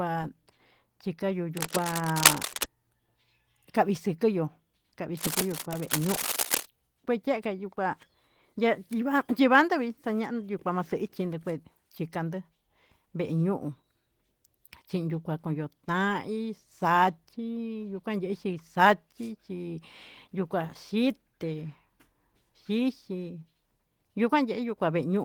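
From 1.57 to 2.66 s there's a burst of what sounds like cable scratch noise, dense and uneven scratching that sits right up at the level of the speech. It comes back from 5.17 to 6.67 s, a bit quieter this time, somewhat below the speech. The likely cause is a worn cable or connector being moved, so its contact resistance jumps around and dumps rough, rustling noise on top of the signal.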